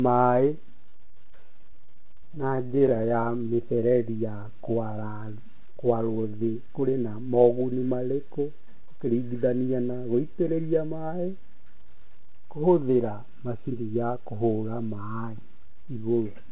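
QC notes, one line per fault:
0.86–3.12 s, repeated stalls (stutter): packets kept arriving late, so the jitter buffer ran dry dozens of times, each gap 30 ms or shorter. The receiver stretched the preceding sound to cover them, filling about a quarter of the span, so nothing is lost but the audio drags and judders.
3.21–4.49 s, jitter buffer slow-down: with its reserve low or its target delay just raised, the buffer repeated single pitch periods and pause fragments to rebuild it, adding 183 ms. The audio plays at 86% speed with pitch unchanged, so sounds come out drawn-out.
6.40–7.57 s and 13.57–14.48 s, jitter buffer speed-up: the buffer held more than its target and trimmed short pitch-period pieces to reduce delay, cutting roughly 150 ms and then about 100 ms. Playback runs at 112% with pitch kept, sounding hurried.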